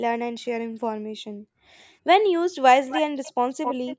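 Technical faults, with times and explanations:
0.66–1.78 s, background gated by the echo canceller: the far-end loudspeaker was active, so the echo canceller's suppressor clamped the microphone path, cutting it by as much as about 40 dB. The room sound behind the speech sinks toward silence for about a second in total across this span, then swells back as the suppressor releases. The ambience seems to switch off and on rather than fade naturally.
2.89–3.01 s, 3.23–3.32 s and 3.63–3.96 s, echo leak: a second copy of the speech arrives 271 ms behind the original. It is strong in the first and last bursts, only a few dB under the direct speech, and much fainter in the middle one. It comes in short fragments rather than a steady reflection. The likely cause is a loudspeaker on the far end whose echo canceller let part of its microphone pickup pass back into the call.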